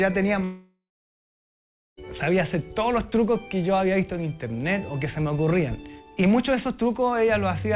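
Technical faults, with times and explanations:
0.44–1.99 s, long network dropout: about 1.54 s of audio is lost, most likely because nothing reached the receiver during that stretch. The receiver stretches the last sound into a buzz or hiss that fades away, leaving about 1.15 s of silence. The audio then returns further on rather than where it stopped. That skip, plus the decaying fill before the silence, separates it from a simple mute or cut. Throughout, the call path carries nothing above 4 kHz, which fits a 64 kbps G.711 mu-law codec.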